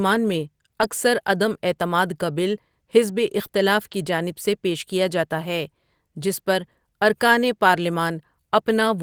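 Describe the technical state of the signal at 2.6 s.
Nothing is wrong with the signal at 2.6 s; the speech there comes through intact, with no dropout, click, distortion or other technical fault to be heard.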